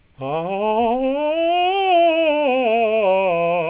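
It's a music clip, and right at the top, from 0.0 to 0.18 s, the real background drops out and you get comfort noise in place of the background: a flat, featureless hiss sitting about 32 dB below the loud parts, at the same level as the background around it. That's likely discontinuous transmission, with the receiver filling the gap with synthetic noise. The band stops at 4 kHz, which fits a narrowband call codec such as G.711 A-law.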